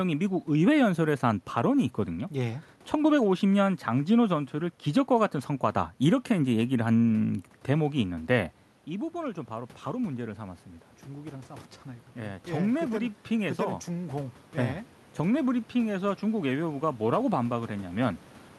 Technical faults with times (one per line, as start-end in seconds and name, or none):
7.95-18.08 automatic gain rising